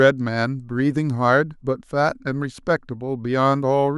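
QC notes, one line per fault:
No fault found in this speech clip.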